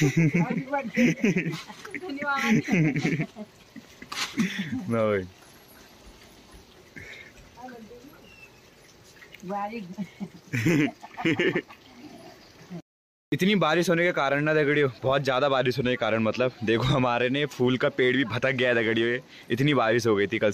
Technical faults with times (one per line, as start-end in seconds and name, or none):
none